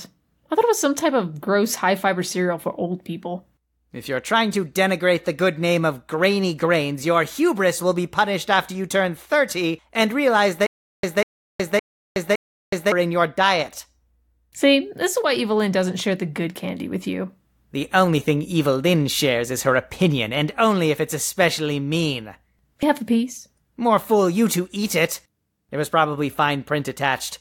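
Speech, with two glitches. From 10.67 to 12.92 s there's a stutter with silent gaps: a 195 ms fragment plays four times, each followed by about 369 ms of dead digital silence, so it repeats every 564 ms. That's most likely the player stalling and replaying its last buffer on each retry, and the audio meant for that stretch is simply gone. Then at 22.83 s there's a quick blip from damaged data in the compressed stream, where the decoder hits bad frames, loses sync and skips ahead to the next valid header.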